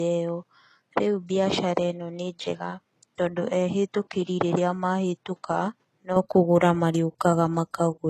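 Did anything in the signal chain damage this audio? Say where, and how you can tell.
Yes. At the codec stage, this is low-bitrate audio saved at a high bitrate. Throughout, nothing is present above 12.3 kHz. That cut-off fits a heavily compressed first encoding later rewrapped as a high-bitrate MP3, which cannot restore what was discarded.

At the capture stage, the input was likely switched to a poorer device. From 0.0 to 6.16 s the band stops at 8 kHz, the level sits about 5 dB lower, and a faint noise floor appears well beneath the speech. The sound then opens up with no gap at the change.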